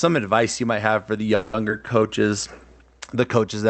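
From 1.35 to 1.55 s the speech stops moving forward and the last sound is stretched into a fading buzz for about 180 ms before the speech resumes exactly where it left off. This is a call audio freeze, most likely caused by packets held up in transit so the jitter buffer ran dry. The receiver's concealment filled the wait, and since nothing was discarded, the result is an inserted gap rather than lost audio.

At 1.69 to 1.72 s a short concealed packet loss follows. About 40 ms of speech is simply absent, with only around 10 ms of synthesized fill bridging the hole, so the passage jumps forward with a brief smear. Dropping that audio also pulled the playout delay back by roughly 30 ms, partly undoing the delay the freeze had built up.

From 1.79 to 2.08 s the jitter buffer slow-down is audible. The receiver repeated single pitch periods and fragments of pause to rebuild its reserve, adding 36 ms over that stretch. 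The speech runs at about 91% of normal speed while keeping its pitch, so sounds are drawn out. Throughout, the Opus call path's 8 kHz audio bandwidth leaves the sound without its upper highs.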